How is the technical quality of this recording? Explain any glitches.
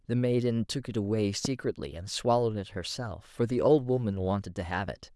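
One loud pop spoils the recording, from 1.45 to 1.48 s: a single sharp pop well above the speech, roughly 10 dB louder, while the speech carries on underneath. It is likely a brief electrical pulse, such as static or a switch or plug glitch, added to the signal and shaped by the circuits after it into a short thump.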